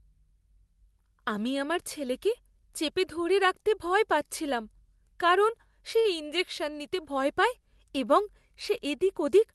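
A short stall from a late packet occurs at 5.99 to 6.07 s: a packet arrived late, the jitter buffer ran dry, and the receiver stretched the preceding sound by about 53 ms before resuming. Nothing is lost, but the held sound drags with a slight buzzy dip, heard through a call codec whose top end stops near 12 kHz, which fits Opus at around 32 kbps.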